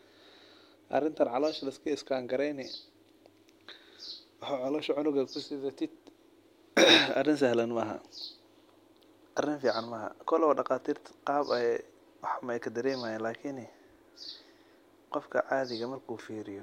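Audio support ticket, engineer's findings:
No technical fault found in the signal; the speech track is continuous and stable throughout, with nothing in the recording or transmission path audibly failing.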